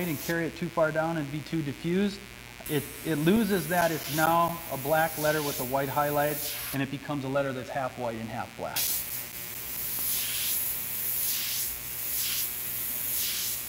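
A mains buzz runs from start to finish. It sits on 60 Hz, roughly 20 dB below the signal. Sharp switching spikes, twice per mains cycle, leak into the audio. Their harmonics stack up into a steady, raspy buzz reaching well above 1 kHz.

CD scratch ticks arrive from 3.37 to 4.93 s, then again from 8.65 to 9.99 s. Each burst has seven or eight ticks, around five a second. A scratch defeats the error correction once per disc turn. The player patches or mutes the damage, leaving brief clicks up to about 10 ms long.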